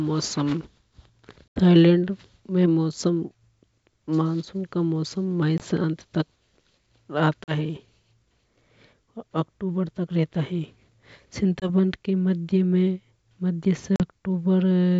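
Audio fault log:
1.48 to 1.59 s, packet loss on an ADPCM call: a hard-edged hole of about 80 ms, which suggests roughly four lost packets, opens just before "थाईलैंड में". The speech then comes back slightly distorted. The gap was filled with silence, so the decoder's adaptive predictor and step size no longer matched the sender's. The distortion settles within some tens of milliseconds as the two ends come back into step.
5.58 to 5.68 s, 7.44 to 7.54 s, 11.60 to 11.70 s and 13.96 to 14.01 s, packet loss on an ADPCM call: these are shorter silent dropouts. The one at 5.58 s comes just before "अंत तक". They last about 20, 40, 20 and 40 ms, which points to one or two lost packets each. Each is followed by slightly distorted speech while the decoder's predictor state catches up with the sender's again. The G.722 wideband coding can be heard carrying speech clear up to about 7 kHz between the gaps.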